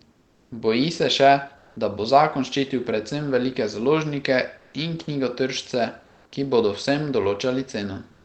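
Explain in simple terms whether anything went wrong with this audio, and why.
In five pauses in the speech, at 0.12 to 0.51 s, 1.57 to 1.76 s, 4.58 to 4.73 s, 6.05 to 6.32 s and 8.11 to 8.25 s, the real room sound is replaced by comfort noise: a flat, detail-free hiss. It's likely from the call's discontinuous transmission, which stops sending during silence. Unlike a dropout, the gap is filled rather than dead.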